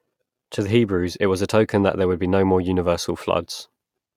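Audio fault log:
No faults detected in this speech recording; nothing to log.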